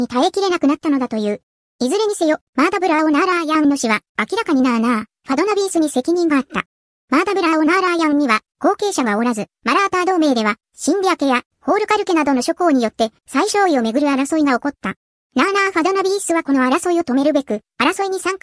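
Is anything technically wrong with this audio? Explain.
Yes, there's a wrong sample rate problem, and it runs the whole way through. Everything plays about 1.38 times too fast, and the pitch sits roughly 5.55 semitones high, so the sound comes across hurried and squeaky. That's what you get when samples are pushed out faster than they were captured, with no conversion in between. Speed and pitch rise by the same factor, and a 1.38 ratio fits audio recorded at 16 kHz being played back at 22 kHz.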